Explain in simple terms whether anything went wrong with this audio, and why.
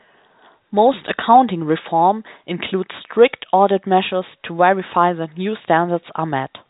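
Nothing went wrong here.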